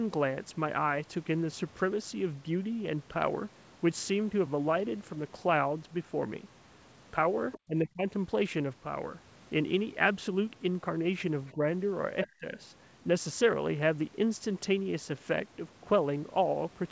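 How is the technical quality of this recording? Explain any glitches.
There's some echo-canceller trouble around three moments. The whole thing tops out at 8 kHz, which fits a wideband call codec like G.722.

Other side's voice leaking through: short scraps of a second voice sneak in at 7.52–7.59 s, 11.46–11.52 s and 12.24–12.28 s. They're fairly noticeable at the first and last spots, roughly 10 to 15 dB under the talker, and barely there at 11.46 s. The likely cause is the far end playing on a loudspeaker, with the echo canceller not fully scrubbing it from the mic. So you get little fragments of someone else.

Speech suppressed in double talk: right after each leak, the talker gets pushed down, at 7.64–8.07 s, 11.53–11.63 s and 12.30–12.57 s. The first and last dips are deep, roughly 30 dB, so the voice nearly drops out for a few hundred milliseconds. The middle one is a milder dip of about 10 dB. 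This is likely the canceller hearing both sides at once, failing to tell them apart, and ducking everything.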